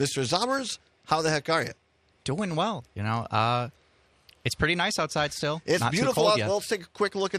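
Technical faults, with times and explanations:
Throughout, MP2 compression: the sound is dull and carries a gurgling, granular grit, likely from MPEG Layer II coding at a rate that fits about 80 kbps. Starved of bits, upper sub-bands flicker on and off, unlike the smeared, watery swirl of modern transform codecs.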